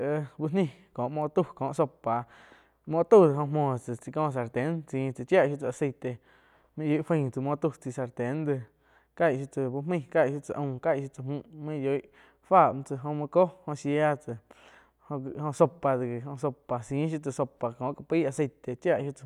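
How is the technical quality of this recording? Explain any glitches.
The recording has no technical glitches. Nothing in the audio points to a fault in capture, processing or playback.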